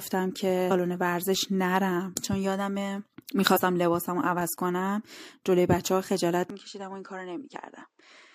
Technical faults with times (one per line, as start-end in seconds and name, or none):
0.70 damaged data in a compressed stream
3.55 damaged data in a compressed stream
6.50-8.35 input switched to a poorer device